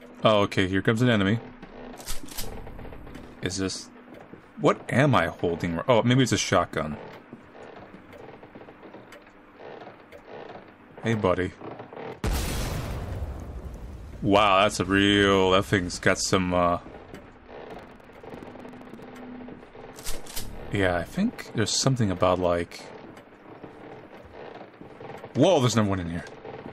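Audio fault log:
17.66–19.07 s, buffer tearing: for about a second and a half there's a rough, robotic rattle riding on the sound at around 23.4 Hz, which fits a 2048-sample buffer. The writer and the hardware reader have drifted and now cross inside each period, so a small slice of every buffer, something like a sixth of it, plays audio left over from about a tenth of a second earlier. The hard joins on either side of that stale slice repeat at the buffer rate, and that's the buzz.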